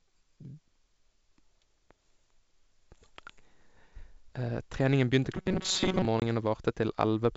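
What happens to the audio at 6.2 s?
At 6.20 s the speech drops into a hard-edged hole of silence, roughly 20 ms long, and comes back with brief, slight distortion before settling by 6.23 s. This is packet loss on an ADPCM call, consistent with about one lost packet. The gap was filled with silence, so the decoder's adaptive predictor and step size no longer matched the sender's and needed a few tens of milliseconds to realign.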